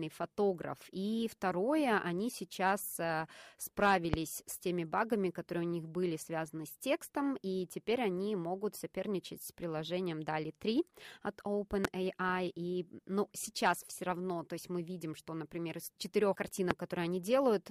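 A brief voltage spike, likely from a switch, plug or static discharge, enters the signal three times. Each one is a single loud pop some 20 to 25 dB above the speech, which carries on underneath: at 4.14–4.16 s before "с теми багами которые", at 11.85–11.87 s, and at 16.71–16.73 s after "что например из четырех".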